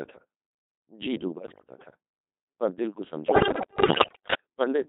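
Throughout, the speech passes through a Codec 2 vocoder, heavily damaged and robotic and buzzy, in a mode that sounds like 2.4 kbit/s. Rebuilt from sine waves rather than the original waveform, it shows on a spectrogram as smeared harmonic stripes confined to 200 Hz to 3.7 kHz.

From 1.38 to 1.77 s, and again from 3.28 to 4.34 s, bit errors on digital voice radio corrupt a large share of the frame parameters, roughly one bit in six and then one in five. Pitch, level and timbre jump erratically into bleeps and warbling gibberish, showing as broken, jumping harmonic tracks and abrupt amplitude steps.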